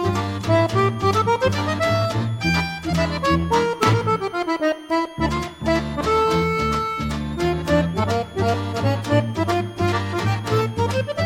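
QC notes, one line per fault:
Throughout, switching supply whistle: a high whistle near 3 kHz wanders between about 3.1 kHz and 3.9 kHz, roughly 30 dB below the programme. A switch-mode supply cycling in an audible burst mode or beating against another converter radiates its switching rate into the audio path.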